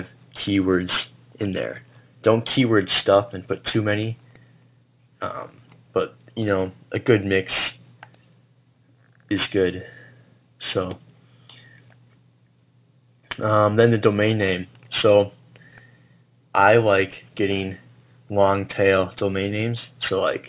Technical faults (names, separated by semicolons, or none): aliasing